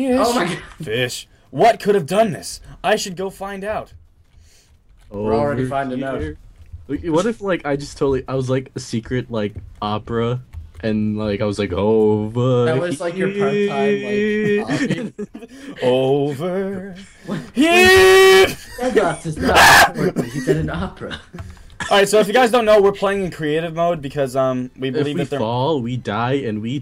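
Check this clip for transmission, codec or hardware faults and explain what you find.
Two sudden gain jumps. Between 3.14 and 5.14 s the level drops by about 6 dB, and from 14.94 to 15.76 s by about 10 dB. Each time it snaps back up abruptly. The sound and its background noise fall and recover together, with no fade in or out. The likely cause is a digital gain change applied from one sample to the next without a ramp, such as a setting switch or bit shift.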